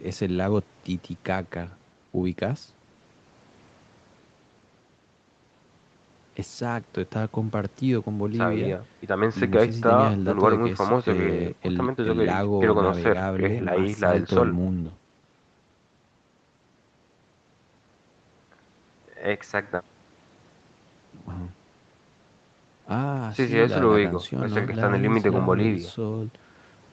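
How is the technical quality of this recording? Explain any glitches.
Nothing stood out as a glitch on listening; the speech carries the narrowed sound of a call's microphone processing, with nothing above 8 kHz and the deepest bass trimmed away, as that path normally does.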